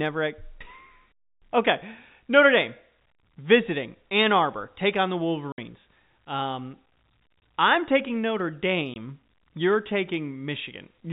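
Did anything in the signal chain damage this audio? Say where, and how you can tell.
Yes, at the network stage: packet loss filled with silence. Dead gaps with hard edges cut the speech at 5.52 to 5.58 s, 7.40 s and 8.94 to 8.96 s. Their 60 and 20 ms lengths suggest whole 20 ms packets dropped, with silence played in their place over the band-limited G.711 telephone coding.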